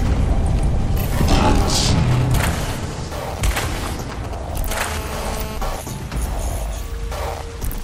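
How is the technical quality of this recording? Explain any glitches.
The recording has two interference faults in a row, both from a nearby 2G mobile phone being picked up and rectified by the audio circuitry.

GSM signalling bursts, from 1.42 to 4.58 s: a phone close by is exchanging short groups of radio bursts with the network without carrying a call. The circuitry demodulates each group, so the audio gains a galloping dit-dit-dit of short buzzes pulsing at 217 Hz, sitting roughly 10 dB below the wanted sound.

GSM phone buzz, from 4.68 to 5.58 s: the phone is now in a call and transmitting in bursts 217 times a second. Each radio pulse is rectified into a click, and the clicks merge into a hard, raspy buzz rich in harmonics of 217 Hz. It bears no relation to the recorded material and sits about 13 dB below it.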